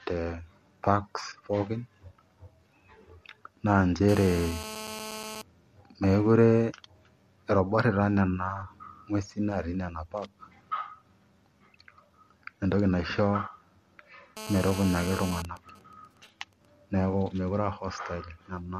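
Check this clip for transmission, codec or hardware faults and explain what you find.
Three kinds of fault show up: phone interference in two forms and one brief dropout.

GSM phone buzz, 4.09–5.42 s and 14.37–15.42 s: a nearby 2G phone on a call pulses 217 times a second, and the audio circuit rectifies those pulses into a harsh, harmonic-rich buzz at about -12 dB under the speech.

GSM signalling bursts, 15.45–16.65 s: the same phone, with its user quiet, sends only sparse burst groups, so you get a much fainter pattern of even ticks at 217 Hz with a longer buzz twice a second.

AAC frame loss with concealment, 16.11–16.13 s: about 20 ms went missing, which fits two lost frames. The decoder patched the gap from the previous spectrum, leaving a tiny smeared, noisy blip.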